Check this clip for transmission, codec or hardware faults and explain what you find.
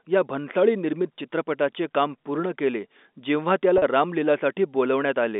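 One transmission fault is audible, carried over a G.711 telephone-band line limited to roughly 250 Hz to 3.6 kHz. At 3.78 to 3.82 s, just after "काम पूर्ण केले जेव्हा", packet loss with pitch repetition appears. About 40 ms of audio, consistent with two 20 ms packets, goes missing. The receiver bridges the gap by repeating the last pitch period, which produces a brief held, buzzy tone.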